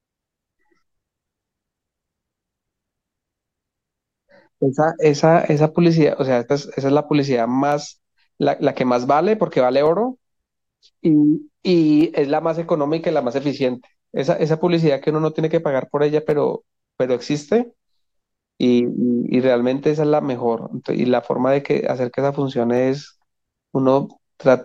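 From 1.26 s to 22.77 s the speech picks up a click roughly every 2.15 s, around ten in all. That steady rhythm points to clock drift buffer slips, likely two clocks about 100 ppm apart, each slip dropping or repeating a handful of samples.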